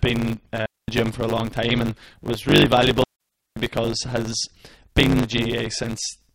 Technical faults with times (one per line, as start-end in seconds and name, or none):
0.00-6.35 block size mismatch (truncated)
0.66-0.88 digital wireless dropout
3.04-3.56 digital wireless dropout
3.16-3.20 gap at a join of encoded pieces